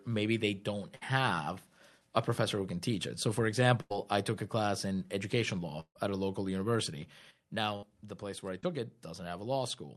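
At 0.95 to 1.03 s, just after "maybe they don't", there is a burst of packet loss. Packets arrived too late or not at all. The receiver carried the last sound forward for about 58 ms and faded it, so it comes out as a held buzz or a fading hiss. About 60 ms of real audio is skipped.

The same happens at 3.81 to 3.92 s, right before "I took a class". Here the fill lasts about 90 ms and about 100 ms is lost.

The longest burst runs from 5.80 to 6.11 s, between "a class in education" and "a local university". The continued sound lasts about 150 ms and is followed by about 80 ms of silence. About 160 ms of speech is gone, and the audio resumes slightly displaced.

A fourth burst at 7.76 to 7.84 s fills about 59 ms and drops about 60 ms.

At 8.60 to 8.65 s there is a short concealed packet loss. About 20 ms never reached the decoder. The receiver patched it with about 23 ms of sound extended from what came before, then blended back. 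It is heard as a brief smear or wobble.

All of this passes through an Opus call path at about 48 kbps. It adds its usual coding noise and cuts off the high frequencies near 12 kHz.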